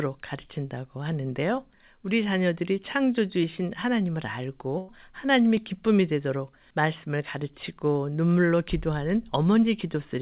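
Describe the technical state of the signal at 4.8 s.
A burst of packet loss from 4.78 to 4.90 s left the receiver concealing about 100 ms, stretching the last sound into a fading buzz or hiss.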